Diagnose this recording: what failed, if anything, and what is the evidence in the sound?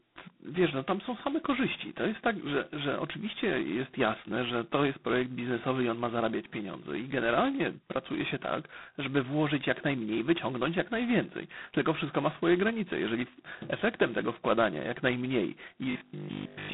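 G.726 ADPCM damage runs through the whole recording at the codec stage, at 16 kbit/s. Each sample carries only two bits of difference from an adaptive prediction, so a harsh, rasping hiss rises and falls with the speech level. The line band sits near 150 Hz to 3.7 kHz, with nothing above 3.9 kHz.

Robotic sound from repeated short buffers appears from 15.91 to 16.73 s as a rigid, metallic 50 Hz buzz over most of that stretch. It likely comes from a starved driver or buffer replaying its last block, which fits a 20 ms buffer repeating while the real audio is skipped.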